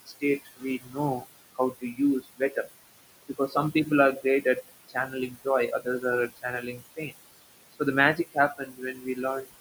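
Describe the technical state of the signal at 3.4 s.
At 3.4 s the speech is being cut by the noise suppressor. Between 3.28 and 3.56 s the suppressor misreads part of the speech as noise and turns it down, by about 13 dB at its deepest, so roughly a tenth of a second of sound comes out faint and swallowed.

Noise suppressor artifacts run through this moment as they do across the whole clip. The suppressor pulls the steady background, room noise that sits about 15 dB under the speech, down by about 19 dB frame by frame, leaving the residual noise pumping in step with the speech.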